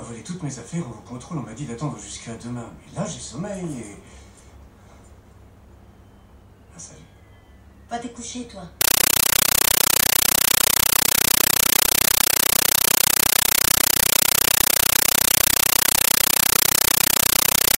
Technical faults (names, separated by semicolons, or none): compressed stream played as audio